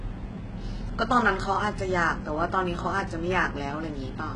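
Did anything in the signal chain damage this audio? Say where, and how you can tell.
Yes, at the codec stage: throughout, sibilants sound gritty and metallic, with nothing above 11 kHz, likely HE-AAC compression at very low bitrate; unlike a plain low-pass, the top band is rebuilt rather than missing.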